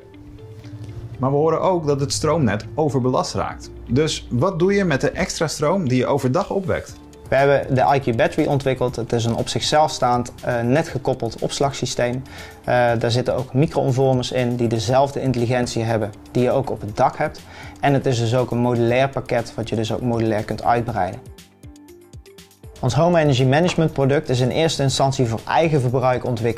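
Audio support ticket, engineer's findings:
No faults found on listening; nothing in the audio points to a problem in the chain, so there's nothing to chase on this ticket.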